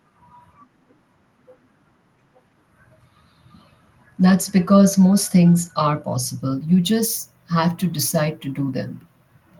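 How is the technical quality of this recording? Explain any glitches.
No glitches can be heard anywhere in this speech recording. Nothing in the signal chain draws attention at any point, so there is nothing to explain.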